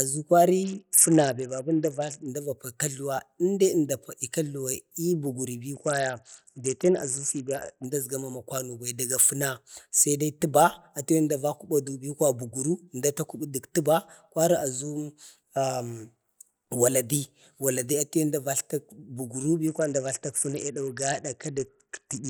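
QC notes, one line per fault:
0.63–2.28 s, 5.74–7.85 s and 19.67 s to the end: Bluetooth SBC bit pool drops. The link appears to have congested and the encoder cut its bit allocation, consistent with a fall from bit pool 31 to about 7 (around 61 kbps). Upper sub-bands starve and the rest quantise coarsely, so the speech turns dull and gritty until full rate returns.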